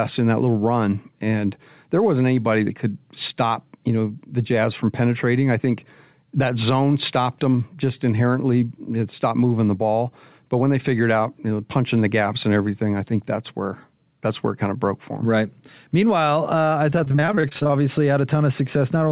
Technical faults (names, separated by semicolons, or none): repeated packet loss (robotic sound)